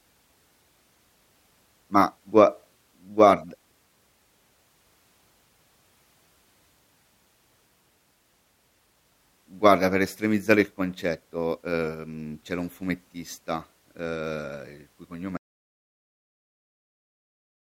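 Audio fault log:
15.37–17.61 s, audio dropout to silence: the speech cuts off mid-flow at 15.37 s and never returns, leaving the last 2.24 s of the clip dead silent, with no room tone or background beneath it. Whatever was said in that stretch is lost. The likely cause is that the input signal went missing, through a disconnected device, a failed link or a stray mute, while the recorder or encoder kept writing silence through to the end.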